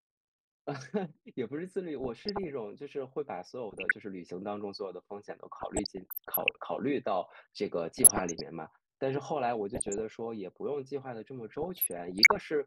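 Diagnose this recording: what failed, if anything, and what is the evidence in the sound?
The codec stage failed: DAB burbling over the speech at 2.0–2.47 s, 3.70–3.92 s, 5.60–6.59 s, 7.96–8.41 s, 9.74–10.00 s and 11.48–12.46 s. Weak reception let bit errors slip past error correction into the MP2 data, so corrupted samples put short blips of noise in individual sub-bands and corrupted scale factors made sub-bands jump in level for up to a frame. A spectrogram would show scattered short bright blocks in isolated bands, with a jagged, blotchy waveform envelope.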